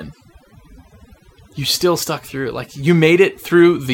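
From start to finish the speech carries overdone noise removal: a noise reduction stage set far too aggressively has pulled individual frequency bands down or out whenever they came close to its noise estimate, taking softer parts of the voice with them. The background drops to near silence sprinkled with twinkling specks. A spectrogram shows scattered isolated dots in the gaps and ragged, holed harmonics; the waveform sits almost flat between phrases.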